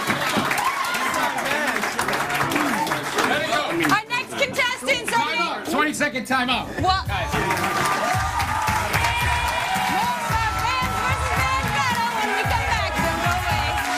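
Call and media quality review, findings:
No faults found in the signal path; levels, timing and continuity hold steady throughout, with no dropouts, clipping, pitch shifts or discontinuities heard.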